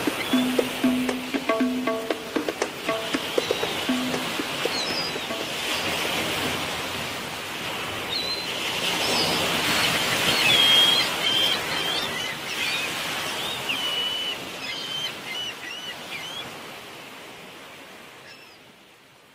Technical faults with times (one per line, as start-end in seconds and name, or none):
11.22-12.35 call bitrate drop